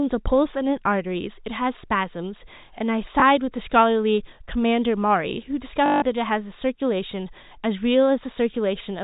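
At 3.20 s, a 20 ms gap is filled by repeating the previous packet: packet loss with last packet repeated, heard as a small blip. From 5.86 to 6.02 s, 160 ms (about eight 20 ms packets) loops, giving a robotic 50 Hz buzz. The waveform shows identical repeated blocks, and the spectrogram is empty above the 4 kHz telephone ceiling.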